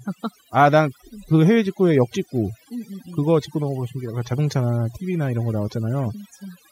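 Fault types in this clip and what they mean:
Overdone noise removal: a noise reducer set too hard, cutting individual frequency bands whenever they sit near its noise estimate. Throughout this speech, pauses drop to near silence flecked with twinkling specks, and the voice loses its quieter components.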